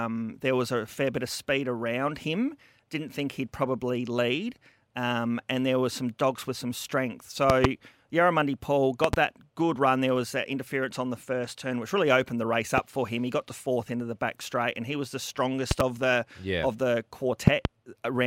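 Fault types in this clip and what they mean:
Loud pop: A sudden voltage step or pulse, likely from a plug, a switch, static discharge or a driver glitch, enters the signal path, and the circuits after it shape it into a brief, sharp transient. Five of these land on top of the speech, which carries on underneath. Double pops come at about 7.5, 9.0, 15.7 and 17.5 s, and a single pop comes near 12.8 s. They peak roughly 15 to 25 dB above the speech.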